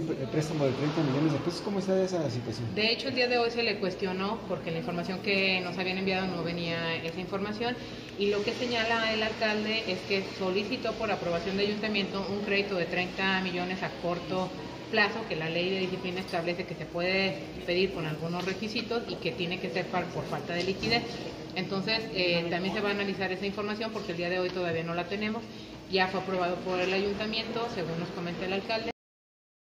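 At 28.91 s the final buffers were never written, a cut-off end: the sound stops mid-event and drops straight to digital silence, with no decay.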